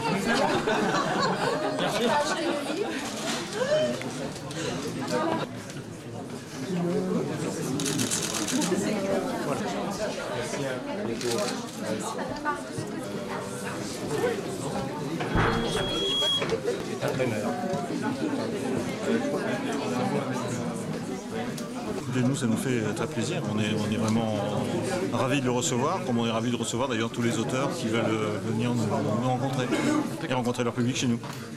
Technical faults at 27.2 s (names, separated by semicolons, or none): none